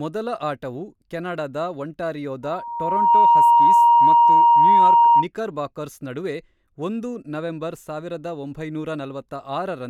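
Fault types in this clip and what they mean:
loudspeaker feedback squeal: the microphone picks up its own loudspeaker, and around 942 Hz the loop gain exceeds one. After "ಮೊದಲ ಆಟವು ಕೆನಡಾದ ಒಂಟಾರಿಯೋದ" that tone swells within under a second into a squeal roughly 15 dB above the speech, lasting from 2.43 to 5.27 s.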